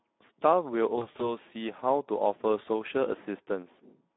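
Throughout, the speech sounds hoarse, grainy and plainly rough, confined to a narrow band from about 200 Hz to 3.6 kHz. That is the Speex codec at a low-to-middle setting, consistent with roughly 11 kbps, where too few bits describe the excitation, leaving noisy, coarse voicing.

From 0.95 to 1.36 s, the voice breaks into short buzzy, smeared stretches that fade and stay weak. That is VoIP packet loss concealed by the speech codec. About 100 ms went missing, scattered across 240 ms with the longest gap 40 ms, which fits five lost 20 ms frames. The decoder patched each gap by extending its last pitch and filter.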